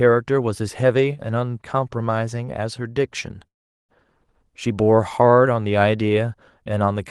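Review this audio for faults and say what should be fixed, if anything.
A call audio freeze at 3.47–3.91 s fills briefly, then goes silent for 0.4 s; speech resumes intact, likely from delayed packets emptying the jitter buffer. A steadier network path or larger adaptive jitter buffer would prevent it.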